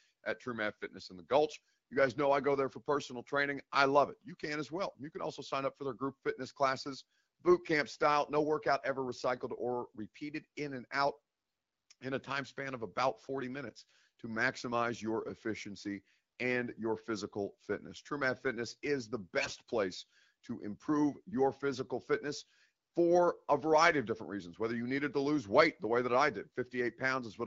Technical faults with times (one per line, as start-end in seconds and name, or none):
19.40-19.56 AMR bit errors
22.40-22.45 AMR bit errors